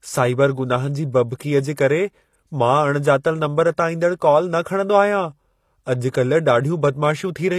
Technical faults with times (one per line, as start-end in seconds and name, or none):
0.00-7.58 HE-AAC compression